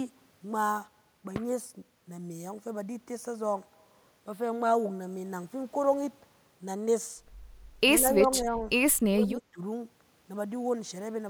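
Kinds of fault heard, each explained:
Speech suppressed in double talk: the speech sags by a few dB between 8.01 and 8.67 s, then drops harder, about 15 dB, from 9.1 to 9.6 s. That's likely an echo canceller clamping down while both ends talked at once.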